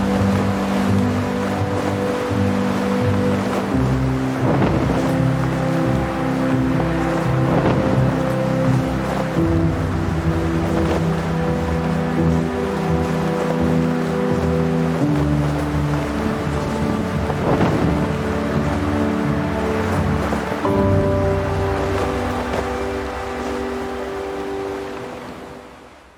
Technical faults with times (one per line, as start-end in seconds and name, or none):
none